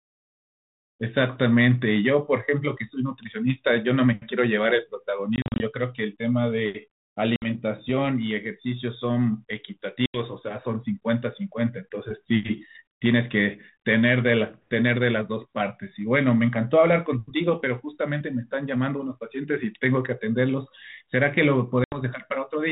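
Packet loss on an ADPCM call breaks this speech at 5.36, 7.36, 10.06 and 21.84 s. Hard silent gaps open. The resynchronising decoder then distorts briefly.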